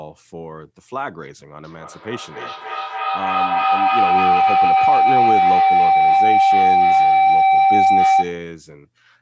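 From 1.64 s to 8.54 s, a loop from microphone to loudspeaker and back gains level on every trip, causing a feedback howl. The repeats, about a third of a second apart, swell into a tone near 700 Hz, peaking about 12 dB above the speech.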